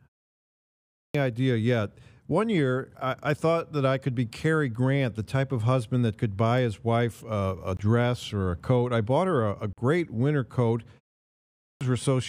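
At 0.53 s, after about half a second of silence, the output device appears to have been asleep. The first 0.62 s of speech, up to 1.15 s, is swallowed, and the voice bursts in mid-sound with no onset. On a waveform the trace jumps from a flat line straight to speech level. A spectrogram shows energy starting abruptly across all bands instead of building up.

At 7.77 s a 23 ms hole cuts the speech, and at 9.73 s a 46 ms one does the same. They are most likely Bluetooth dropouts, in which audio packets reached the headphones too late and were discarded. The lengths fit one lost packet and two lost packets. Each is heard as a brief gap, and the speech resumes further along, as if it had kept playing. Both show as vertical gaps in the waveform and the spectrogram.

At 11.22 s the clipped start after a pause happens again, this time after a pause of only 0.3 s. About 0.59 s is lost, up to 11.81 s. 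The attack is truncated in the same way and looks the same: a hard vertical edge where the trace restarts.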